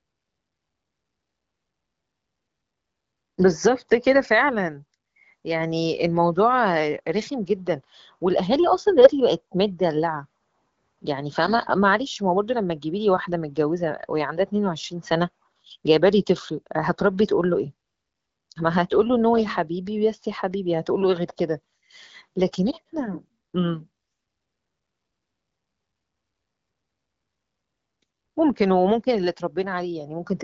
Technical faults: none

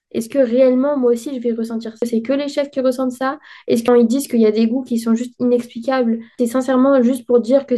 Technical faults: damaged data in a compressed stream

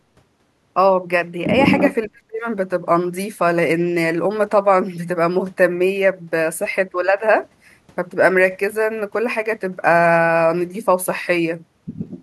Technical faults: echo leak; speech suppressed in double talk

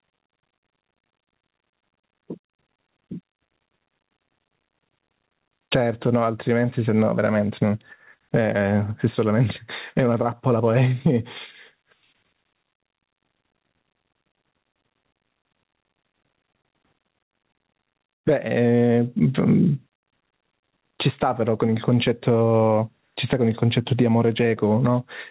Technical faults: gain pumping

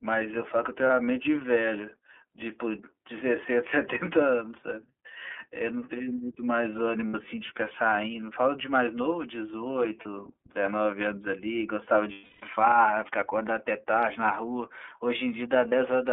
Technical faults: iLBC codec; lost iLBC frames

